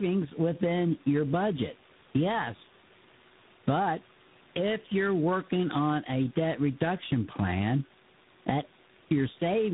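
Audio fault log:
Throughout, tandem speech coding: the speech passes through AMR-NB 7.4 kbit/s, G.711 mu-law and G.726 24 kbit/s, and is re-encoded at each stage. The result sounds rough, muffled and warbly, with nothing above 3.8 kHz.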